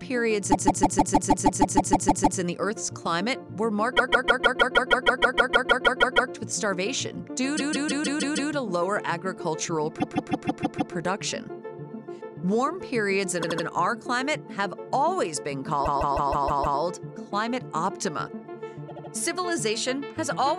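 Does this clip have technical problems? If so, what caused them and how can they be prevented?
Yes: repeated frames, where a run of compressed frames was written or sent more than once, so the decoder replays the same block of about 157 ms (78 ms at 13.42 and 18.88 s). The result is a stuttering loop at 0.51–2.39, 3.96–6.31, 7.56–8.50, 9.99–10.93, 13.42–13.65, 15.85–16.79 and 18.88–19.11 s, each stretching the audio by the repeated time. To prevent it, check frame sequence numbers or timestamps on write and receive, and discard duplicates before decoding.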